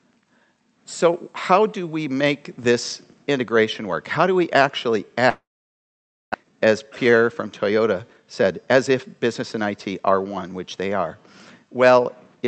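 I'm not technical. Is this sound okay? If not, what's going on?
No. From 5.29 to 6.36 s there is a long network dropout, likely from the connection stalling. The last sound is stretched into a fading buzz, then about 0.9 s of silence. Unlike a simple mute, about 0.6 s of the audio never returns.

Right after, from 6.43 to 10.11 s, comes a jitter buffer speed-up. The audio plays about 11% fast and sounds hurried while it catches up on roughly 0.4 s of built-up delay. Unlike a sped-up recording, the pitch stays the same.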